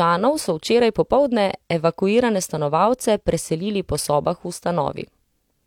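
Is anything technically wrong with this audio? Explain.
No, the signal shows no technical faults anywhere in the clip.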